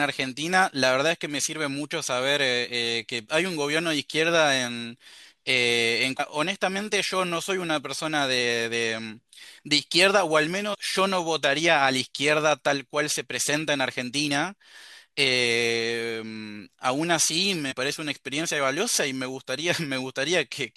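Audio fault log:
6.19, 10.73–10.75 and 17.71–17.73 s, damaged data in a compressed stream: corrupted bytes leave the decoder misreading frames and resyncing, giving brief glitches of roughly 20 ms each, seen as thin full-band vertical streaks on a spectrogram and abrupt spiky discontinuities in the waveform.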